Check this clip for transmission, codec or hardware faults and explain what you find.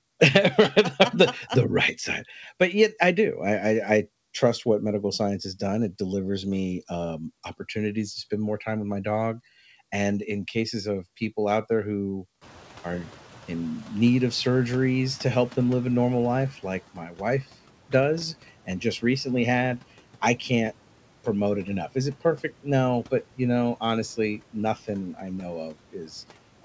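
Two noise suppression faults stand out. Both follow a sudden rise in room noise.

From 12.41 to 16.51 s, just after "people out there who", the noise suppressor is catching up. The room noise jumps by about 23 dB near 12.5 s. The suppressor's noise estimate lags behind this. So the noise comes through with less reduction at first, then sinks by about 9 dB over 4.1 s.

From 16.94 to 17.21 s, speech is cut by the noise suppressor. It mistakes part of the speech for noise. About 200 ms of sound drops by up to about 12 dB. It sounds swallowed and faint.

The audio carries nothing above 8 kHz, which fits a wideband call codec such as G.722.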